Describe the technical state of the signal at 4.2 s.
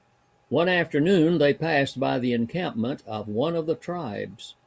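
At 4.2 s the speech signal is intact, with no audible technical fault at that moment.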